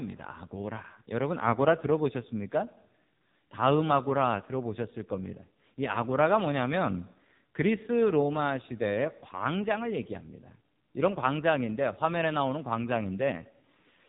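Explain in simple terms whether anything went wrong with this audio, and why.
Yes, something went wrong for the whole clip: the speech has passed through the AMR narrowband mobile codec, the codec used for older mobile phone calls. Everything above about 3.8 kHz is gone, so the voice sounds muffled and phone-like. Unlike a simple treble cut, the damage here is heavy. The codec rebuilds the voice from a rough model of the throat, which leaves it buzzy and artificial rather than just dull.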